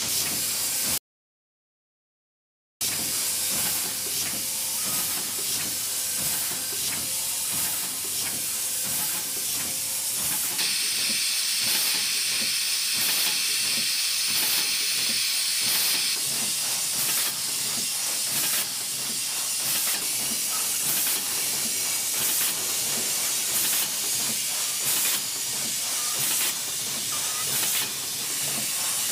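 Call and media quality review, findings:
Audio dropout to silence, 0.98 to 2.81 s: sound cuts off mid-flow, about 1.83 s of dead silence, no room tone, then resumes. Likely input path lost briefly (device disconnect, link drop or stray mute) while the encoder kept writing silence. Content in the gap gone.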